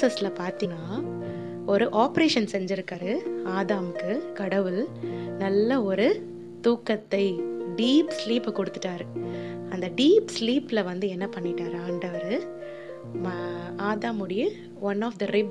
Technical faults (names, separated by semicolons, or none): compressed frames skipped